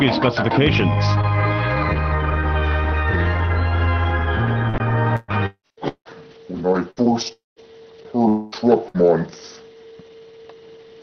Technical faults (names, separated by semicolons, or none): repeated packet loss (robotic sound); long network dropout